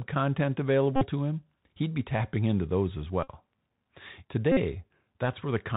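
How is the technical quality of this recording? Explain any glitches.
The technical quality is poor: the speech has come through a narrowband Bluetooth headset link, and three short buzzy glitches interrupt it.

The Bluetooth CVSD headset codec is audible throughout. It codes each sample as a single up-or-down step whose size adapts, and the sound fits a 64 kbps CVSD stream. Nothing above 4 kHz survives, so the voice sounds boxed-in. S sounds turn scratchy, loud bright moments distort where the step can't keep up, and a grainy hiss sits under everything. On a spectrogram the energy stops at a hard ceiling at 4 kHz, with a speckled noise floor below it.

Bluetooth headset packet repeated occurs three times: 0.96 to 1.07 s, just before "him he'd be tapping"; 3.23 to 3.30 s, just after "tapping into those as"; and 4.52 to 4.58 s. Each time, voice packets were lost and the chip replayed the last good packet's bits over and over. 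Each run of repeats spans roughly 41 to 53 ms. The short chunk repeating every 3.75 ms produces a steady buzz near 267 Hz. In the waveform the burst looks like a regular, repeating pattern, and on a spectrogram it shows as evenly spaced horizontal harmonic lines above 267 Hz.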